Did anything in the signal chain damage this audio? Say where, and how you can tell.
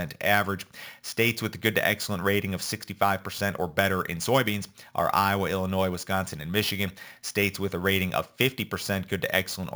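Yes. A bright metallic fizz tracks the speech throughout, about 16 dB below it between 8 and 16 kHz, pointing to imaging from sample-and-hold upsampling of a 16 kHz source without smoothing.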